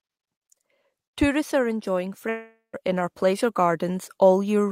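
Likely a long network dropout, 2.29 to 2.75 s: after "are enjoying", fading buzz then silence fills 0.44 s; speech resumes at "in our pleasure".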